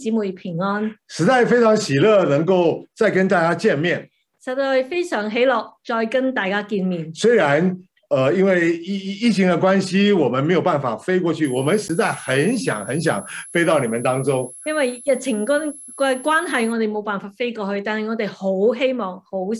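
From 11.45 s to 16.73 s a thin, high whistle sits about 20 dB under the audio, its pitch wandering between 10.8 and 11.0 kHz. This is a switching supply whistle: a power supply running in an audible burst mode, or beating against another supply, shifting pitch as its load varies. Within that stretch, at 11.88 s, the audio drops out for 11.6 ms and returns abruptly, heard as a brief tick or dip. This block of digital silence, whose length fits a 512-sample buffer, likely comes from the output buffer not being filled in time.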